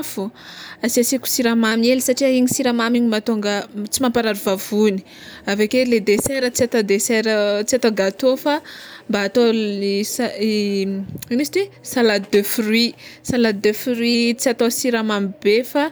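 From 1.72 to 2.95 s, and again from 13.64 to 14.15 s, the speech runs about 5.8% fast and sits nearly a semitone sharp, then snaps back. This is likely a drift correction step, with clock-matching software briefly changing playback rate to rebalance its buffer.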